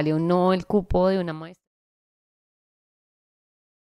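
Speech with a smooth, editor-style fade-out running from around 1 s to 1.68 s, and no technical faults to report.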